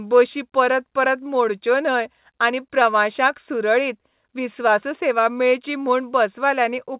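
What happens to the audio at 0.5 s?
Nothing goes wrong at 0.5 s: the speech continues intact through its usual telephone-band G.711 sound, with no dropout, click or distortion at that point.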